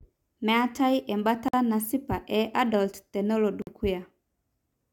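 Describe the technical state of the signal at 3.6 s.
At 3.62 to 3.67 s there's a gap at a join of encoded pieces: untrimmed encoder delay and padding drop 50 ms of near-silence into the speech, which then resumes.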